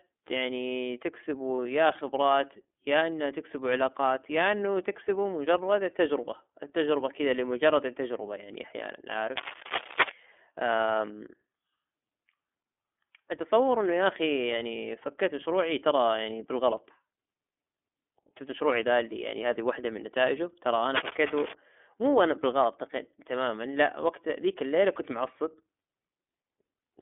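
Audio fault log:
Throughout: iLBC codec. The speech passes through a narrowband VoIP coder whose 30 ms frames each stand alone, which fits iLBC at 13.33 kbps. Only about 250 Hz to 3.5 kHz survives, so the audio sounds thin, muffled, plainly rough and slightly synthetic.
1.56–1.59 s: lost iLBC frames. One 30 ms packet went missing, and the decoder filled the gap by repeating the last pitch cycle blended with noise. This causes a brief held, faintly buzzy vowel-like smear. Because each frame is independent, clean decoding resumes immediately afterwards.
9.37–10.11 s and 20.95–21.55 s: cable scratch noise. Dense, irregular bursts of crackling and rustling sit over the speech. The first is roughly as loud as the speech itself, and the second is a little quieter. This is likely a worn cable, connector or control being moved, so its contact resistance fluctuates rapidly.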